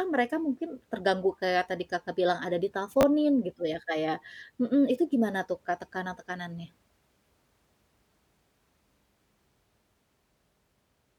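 A brief garbled jumble at 3.01 to 3.03 s in this speech clip, between "bilang ada" and "gitu ya kayak mhm", is chunks out of order: a 10 ms chunk arrived one chunk late, creating three hard joins.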